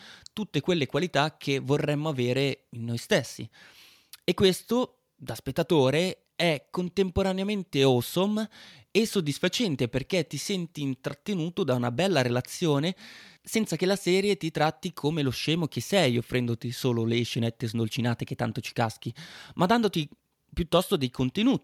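No technical faults can be heard anywhere in this speech recording. Nothing at any point in the timeline stands out as a defect.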